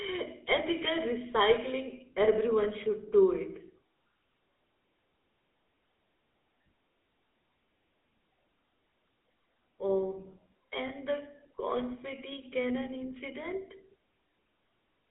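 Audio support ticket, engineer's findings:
GSM full-rate codec throughout. Coarse vocal-tract model driven by sparse regular pulses, excitation thinned to every third sample, consistent with 13 kbps full rate. Result: buzzy, gravelly speech, plainly audible, band limited to roughly 250 Hz to 3.7 kHz.

Lost GSM frames, 10.88 to 10.91 s. One bad frame concealed by repeating the previous frame's parameters, which fits a single 20 ms frame. Heard as a brief rough, metallic ring in place of the missing speech.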